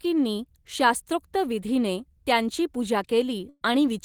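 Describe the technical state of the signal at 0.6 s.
At 0.6 s the signal is intact, with no dropout, distortion, clipping or other technical fault audible in the speech at that moment.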